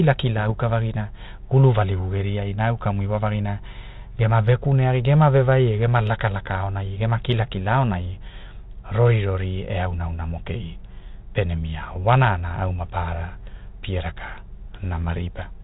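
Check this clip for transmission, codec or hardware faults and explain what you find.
One transmission fault stands out, near the very start of the speech.

Bit errors on an ADPCM link, from 0.37 to 0.53 s, just before "vagina gulu": flipped bits corrupt the difference codes, and each one also knocks the decoder's adaptive step size and predictor off track, so the damage rings on for milliseconds. The error rate is low, around one or two bits per thousand, hitting a few frames. It is heard as short pops and a rough, gritty burst with quick jumps in level. The underlying band-limited coding sounds like 32 kbit/s G.726, with only light coding roughness.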